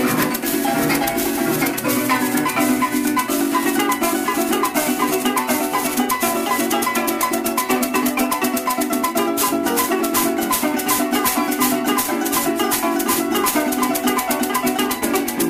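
Sample clock jitter affects the audio throughout. An unsteady converter clock, wandering by something like ten microseconds, mistimes each sample and leaves a gritty roughness only about 10 dB below the signal. Unlike a fixed background hiss, it swells on loud, bright passages and vanishes in silence.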